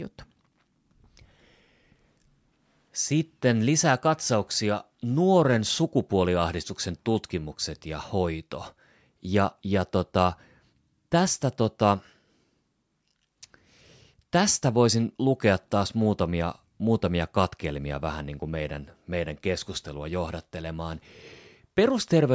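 No technical faults can be heard in the speech. The call microphone processing leaves nothing above 8 kHz and trims away the lowest bass, which is how that path normally behaves.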